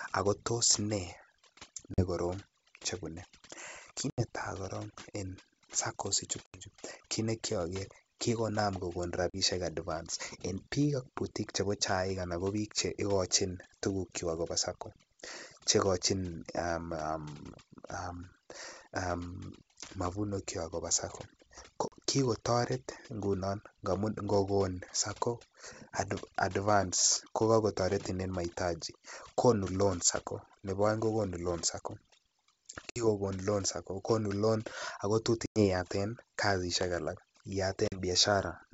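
Overdone noise removal runs through the whole clip. The suppressor is set far too strong. It pulls down any frequency band that sits near its noise estimate. The background drops and breaks up into twinkling specks. Quiet parts of the speech vanish too.

Packet loss on an ADPCM call cuts in eight times: 1.94, 4.10, 6.46, 9.30, 21.88, 32.90, 35.46 and 37.88 s. Each gap is a hard-edged hole of silence, 40 to 100 ms long, roughly two to five packets' worth. The longest follows "loan ko tot". The 80 ms gap at 4.10 s comes just before "korong en". After each hole, the decoder's predictor and step size no longer match the sender's. The speech returns slightly distorted. It settles within a few tens of milliseconds.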